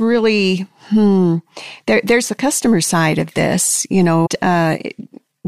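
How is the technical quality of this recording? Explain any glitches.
The recording has one clear glitch, a jump in the speech from 4.25 to 4.27 s. A stream segment skipped is the likely cause: one chunk of the segmented stream failed to arrive, and the player moved straight on to the next chunk instead of waiting. Whatever that missing segment held is simply gone, so the speech lurches forward abruptly, marked by a brief blip where the two non-adjacent pieces of audio are butted together.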